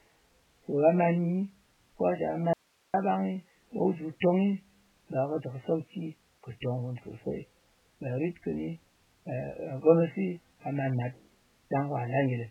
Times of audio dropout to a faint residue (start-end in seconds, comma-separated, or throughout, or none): 2.53-2.94